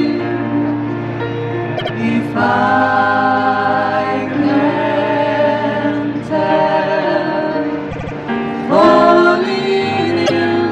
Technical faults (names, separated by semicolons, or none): repeated frames